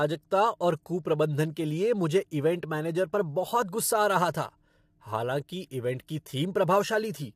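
From start to finish the speech has a rough, grainy quality, with noise filling the gaps between the pitch harmonics and nothing at all above about 15.6 kHz. That is plainly audible low-delay AAC compression, likely AAC-ELD, the video-call codec, working at what sounds like around 32 kbps. At that low bitrate the bits run thin, so noise lands where the voice's structure should be.

At 6.07 s there's a brief pre-echo: a hiss of about 16 ms creeps in just ahead of a sharp attack, and the attack itself comes across soft and smeared. The transform codec spreads its quantisation noise across the whole block, so noise scaled to the loud onset also fills the quiet stretch before it, where nothing masks it.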